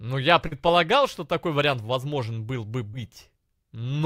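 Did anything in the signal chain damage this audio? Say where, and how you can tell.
Yes. Short concealed packet loss on the network leg: about 40 ms smears at 0.47 s and 2.89 s, where the decoder stretched the preceding sound to cover missing audio.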